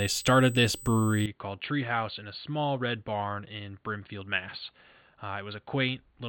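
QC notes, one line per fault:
Throughout: USB whine, a steady fixed-pitch tone at 8 kHz sitting about 20 dB below the speech, from 125-microsecond microframe current leaking through power or ground; on a spectrogram it is a thin, unbroken horizontal line at 8 kHz across the clip.
1.26 s to 6.29 s: a sudden dulling, with nothing above 4.5 kHz, a level drop of about 10 dB and a new noise floor about 45 dB under the speech, with no gap at the change; the likely cause is the input switched to a poorer device. The spectrogram shows a hard ceiling at 4.5 kHz from 1.26 s, and the waveform steps down in height.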